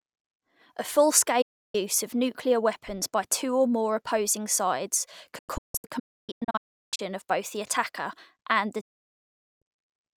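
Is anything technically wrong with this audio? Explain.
Yes. The speech has digital broadcast dropouts at 1.42 to 1.75 s, 5.38 to 7.00 s, and 8.81 to 9.62 s. The receiver lost valid frames and muted, fading out in 8 ms. The middle dropout breaks into several holes, the longest 352 ms. The lost speech never returns.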